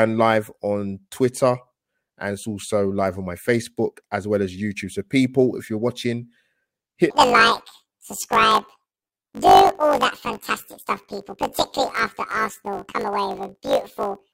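Planar audio read as interleaved runs from 7.10 s to the end at 14.33 s. Each 20 ms block of left-then-right samples plays as two double-speed halves, an octave up, so the speech turns into a robotic buzz at the 50 Hz block rate.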